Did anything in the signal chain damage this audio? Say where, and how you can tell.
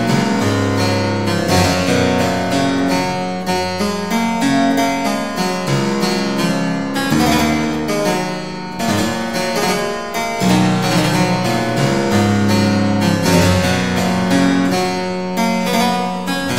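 No, nothing in the signal chain damaged this audio that I can hear.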